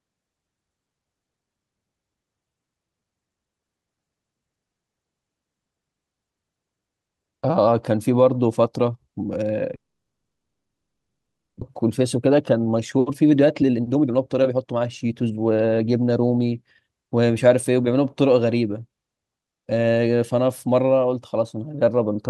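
From 9.75 s to 11.63 s the speech breaks off into a brief fading buzz, then near-silence, and resumes with about a second skipped. This is likely a long network dropout. The decaying tail and the lost material distinguish it from a simple mute.

From 11.83 s to 17.19 s a jitter buffer speed-up follows. Short pitch-period slices are trimmed repeatedly, roughly 0.7 s in total, to recover the built-up delay. Speech runs about 115% fast and sounds hurried, yet pitch stays unchanged, unlike a resampling error.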